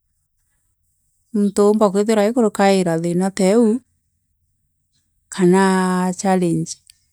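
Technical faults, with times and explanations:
No technical faults can be heard anywhere in this recording.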